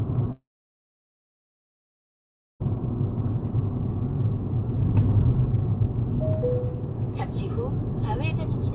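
A clip of sounds, heard through a narrowband call path with nothing above 4 kHz. From 0.32 to 2.62 s there's a gap, likely a long network dropout: a brief fading fill, then about 2.2 s of silence, and the sound resumes with that stretch missing.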